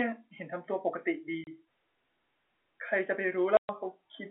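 Packet loss filled with silence opens dead gaps at 1.44 s (30 ms) and 3.57 s (120 ms, four times longer), with hard edges instead of concealed, repeated sound.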